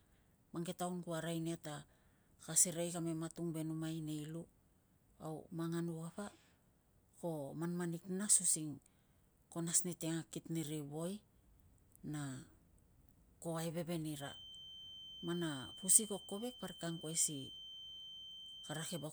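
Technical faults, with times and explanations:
14.08 to 19.13 s, feedback whistle. A thin, steady tone at 3.1 kHz appears behind the speech and lasts to the end of the clip. It sits well below the speech, roughly 15 dB down, and wavers a little in level. It never grows or runs away. The likely cause is a loudspeaker-to-microphone loop held just at the edge of feedback. That loop keeps one frequency ringing at a low level.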